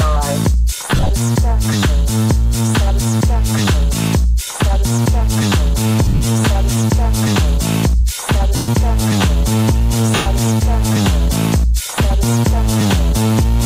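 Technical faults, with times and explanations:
0.95–1.11 s, 6.05–6.22 s, 8.54–8.69 s and 10.15–10.26 s, lost LE Audio frames: the Bluetooth LE Audio link dropped about 100 to 140 ms of audio in each burst, scattered over up to 160 ms. The LC3 decoder patched the gaps by replaying the last good spectrum with scrambled phase, so tonal content smears into a hissy wash. In the longer runs, up to about a tenth of a second at 8.54 s, that fill fades towards silence before the sound returns.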